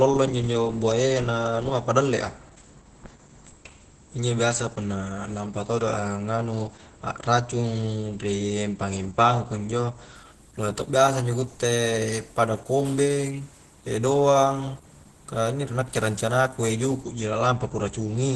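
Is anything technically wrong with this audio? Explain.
Yes. For the whole clip the speech sounds muffled and hoarse, with nothing above 12.1 kHz. The likely cause is heavy Opus compression. At very low rates Opus switches to its SILK speech mode, which models the voice as a filtered excitation rather than coding fine spectral detail. That loses breathiness and clarity, and the narrow band and damage fit a very low bitrate of about 12 kbps.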